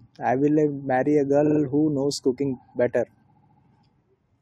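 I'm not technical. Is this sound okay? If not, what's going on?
No. This speech has repeated frames: the recording stored or sent the same tiny chunk of compressed audio several times, so the player replays it. At 1.45 s, a 46 ms piece plays three extra times through 1.59 s, which fits two short frames. At 3.31 s, a 70 ms piece repeats four extra times through 3.59 s. You hear a quick stutter each time, and the clip runs about 0.42 seconds longer than it should.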